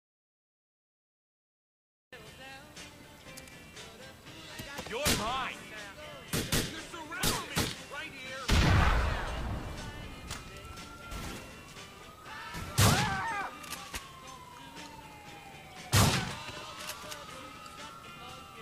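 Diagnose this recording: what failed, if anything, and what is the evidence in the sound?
The clip opens in an audio dropout to silence that lasts until about 2.13 s, when sound starts abruptly. The gap is silent with no room tone, so the likely cause is lost input from a disconnected device or failed link. A noise gate or fade would leave residual hiss or ramp in.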